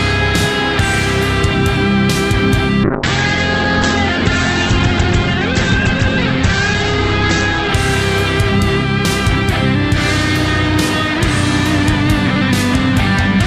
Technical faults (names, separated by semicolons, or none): call bitrate drop